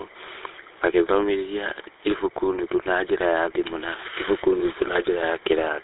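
GSM full-rate codec damage runs throughout the clip, from start to finish. The speech has been squeezed through a coder that models the vocal tract and rebuilds the excitation from a sparse train of regular pulses, which fits a 13 kbps full-rate stream. The result is a plainly audible buzzy, gravelly roughness. The band is held to roughly 150 Hz to 3.7 kHz, with nothing above 3.8 kHz, so sibilants lose their edge and the sound is dull and narrow.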